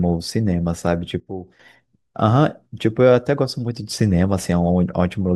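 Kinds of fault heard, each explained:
Sudden gain jump: at 1.2 s the speech falls by about 12 dB in one step and springs back at 1.6 s, likely a gain change applied without a ramp. The background noise falls with it, unlike a compressor's gradual, level-driven ducking.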